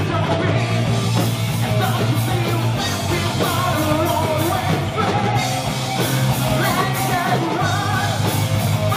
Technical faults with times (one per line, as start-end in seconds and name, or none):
0.55 compressed frames skipped